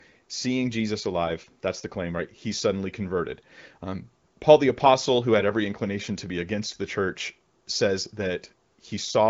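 No technical faults are audible.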